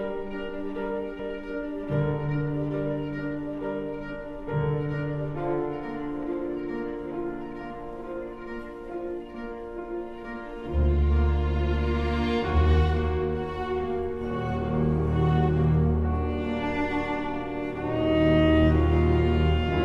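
A stretch of audio was discarded while later audio was already queued, either lost in transit or dropped by an overflowing jitter buffer, causing a skip ahead at 1.19 to 1.21 s. About 0.7 s of sound is missing, and playback jumps forward with no gap, splicing both sides directly together.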